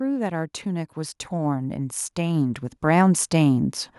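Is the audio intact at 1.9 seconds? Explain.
No, automatic gain rising runs from 0.28 to 3.78 s: the gain control, reading the input as too quiet, lifts speech and background together by about 12 dB.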